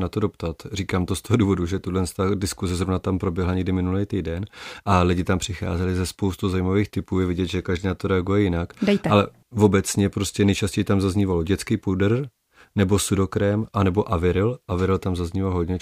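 No technical faults can be heard anywhere in the recording.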